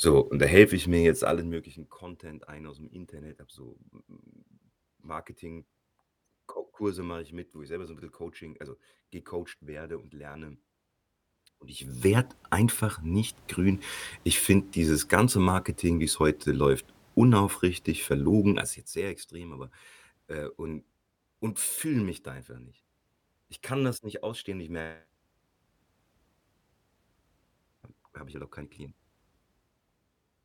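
Zipper noise at 1.12–1.9 s, 11.62–12.22 s and 18.48–18.94 s: level ramps of about 20 dB down, 20 dB up and 15 dB down move in unsmoothed steps, roughly fifty per second, ticking audibly.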